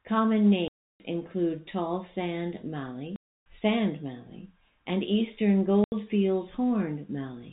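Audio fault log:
0.68–1.00 s, 3.16–3.46 s and 5.84–5.92 s: packet loss filled with silence. The speech cuts to dead silence for 320, 300 and 80 ms, with hard edges. Missing packets were replaced with silence, and the gap lengths fit 20 ms packets.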